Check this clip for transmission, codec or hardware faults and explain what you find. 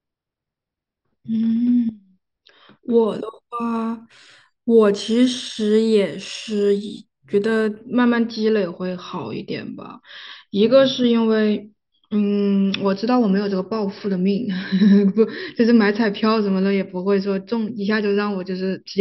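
One fault is present in the speech. Imaging from linear upsampling, 3.07 to 7.81 s: straight-line interpolation, apparently from a 12 kHz rate, dulls the top and leaves weak mirror images at 6 to 12 kHz, giving sibilants a metallic shimmer.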